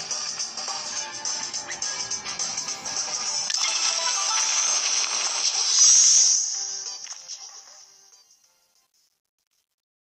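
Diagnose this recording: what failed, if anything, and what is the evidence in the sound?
Truncation distortion on the fade, introduced at a sample-format conversion or gain stage that reduces word length without dither. The fade-out, which starts around 6.3 seconds and runs to about 10.2 s, is smooth in shape, but from 6.32 s the tail turns grainy. Between 7.28 s and 10.17 s the grit is at its worst. As the level falls toward the smallest step, the waveform collapses into a few square steps, which fits a word length of roughly 10 bits.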